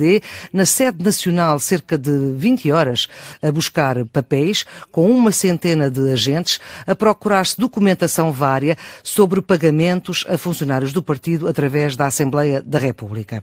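A lost packet rebuilt from error correction falls at 0.83 to 0.85 s, just before "nacional cerca de". A 20 ms stretch, which fits a single lost packet, was replaced by the low-bitrate copy carried in the next packet, so no gap opens. That moment sounds briefly rougher and noisier.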